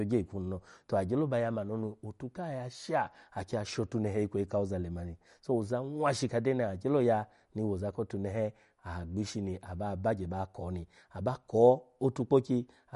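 Throughout, the speech is cut off sharply at 11.2 kHz and sounds plainly watery and swirly, likely MP3 compression, consistent with a bitrate near 48 kbps.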